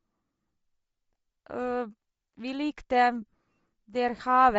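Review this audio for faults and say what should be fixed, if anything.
The whole speech clip has a breathy, grainy edge, with the top end thinned and filled in by hiss-like noise. That's likely Bluetooth LC3 compression at a low bitrate, something like 32 kbps with 7.5 ms frames, where the codec zeroes upper bands and substitutes noise. Raising the LE Audio bitrate or using a higher-quality LC3 configuration should clear it up.

Between 3.22 and 3.32 s there are lost LE Audio frames: about 45 ms of dropouts scattered across roughly 105 ms, in short runs of around 20 ms at most, which fits six or so lost frames. The decoder repeats the last spectrum with scrambled phase, so you hear a brief noisy smear instead of clean speech. Keeping the link stable, with a shorter range, less 2.4 GHz interference, or retransmission headroom, should prevent these.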